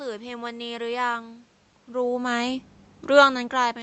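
No technical faults can be heard anywhere here.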